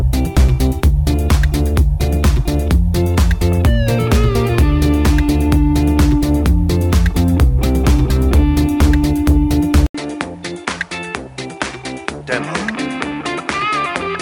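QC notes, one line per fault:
9.87–14.22 s: input switched to a poorer device. After an 80 ms gap, the sound returns about 10 dB quieter and duller, with nothing above 10.5 kHz. A new noise floor sits about 30 dB under it. Likely cause: a narrower-band microphone taking over.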